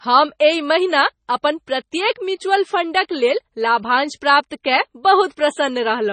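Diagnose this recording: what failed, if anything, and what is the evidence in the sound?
The codec stage failed: the audio went through what is likely heavy MP3 compression at a very low bitrate, which fits roughly 24 kbps. Starved of bits, the encoder drops everything above 9 kHz for the whole clip, so the speech sounds dull and band-limited. It also zeroes quieter frequency lines that then flicker in and out between frames, which gives the speech a watery, swirling texture, chirpy s sounds and smeared consonant onsets.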